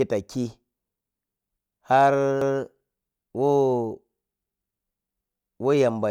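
Repeated buffer at 2.42 to 2.60 s and again at 4.46 to 4.64 s in this speech clip. Each time, a roughly 0.19 s stretch of the voice plays twice in a row with a hard join, heard as a short stutter. New audio arrived late, so the device replayed its last buffer once. The length fits an 8192-sample buffer, and little or no speech seems to be lost.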